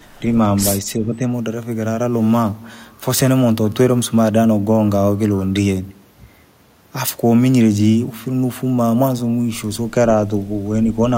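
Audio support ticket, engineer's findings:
Speech suppressed in double talk: brief level dips at 0.20–0.36 s (slight, about 5 dB) and 0.96–1.27 s (about 10 dB). The signal is turned down, not cut out like a dropout. Likely cause: the echo canceller suppressing near-end speech during overlap.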